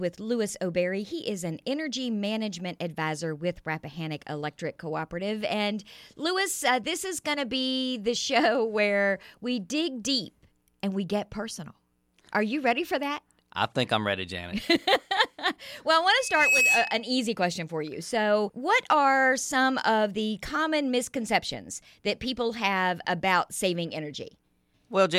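From 16.16 to 17.10 s, a loudspeaker feedback squeal occurs. A microphone re-captured its own loudspeaker, and at 2.6 kHz the loop gain passed one. That frequency rose within about 0.4 seconds to a piercing tone standing a few decibels above the surrounding sound.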